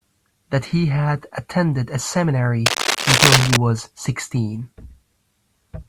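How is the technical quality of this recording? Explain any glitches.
The recording has one clear glitch. From 2.66 to 3.57 s, cable scratch noise sits over the speech, roughly 5 dB louder than it. This is likely a worn cable or connector being moved, making its contact resistance flicker. It sounds like scratching or rustling. A spectrogram shows dense, ragged broadband streaks, and the waveform shows spiky, irregular bursts.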